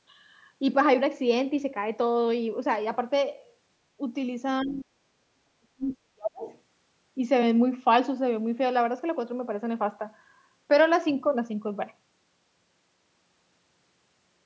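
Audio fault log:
4.63–6.47 s, speech suppressed in double talk: the speech drops by roughly 40 dB, likely from an echo canceller turning down overlapping talk.
6.47–6.59 s, other side's voice leaking through: a brief, faint second voice sits roughly 35 dB below the speech, likely loudspeaker echo the canceller left behind.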